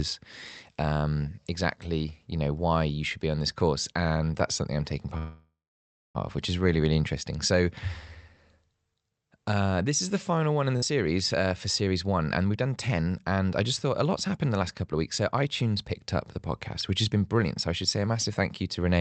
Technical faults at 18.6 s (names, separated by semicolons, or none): jitter buffer speed-up